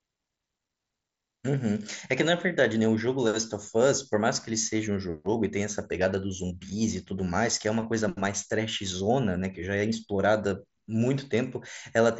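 There are no technical faults in this speech; it comes through a Bluetooth mSBC headset link, with nothing above about 7.7 kHz.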